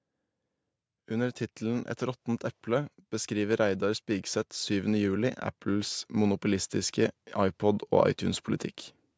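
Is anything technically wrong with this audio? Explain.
Yes. From 1.06 s to 8.52 s there is automatic gain rising: the automatic gain control judged the incoming level too low and kept pushing its gain up step by step, by about 11 dB in total over those seven and a half seconds. Because the control acts on the whole signal, the voice and the background noise climb together, so the speech slowly grows louder and closer while the room bed rises beneath it, with no cut or jump. The call microphone processing, which leaves nothing above 8 kHz, is not part of the fault.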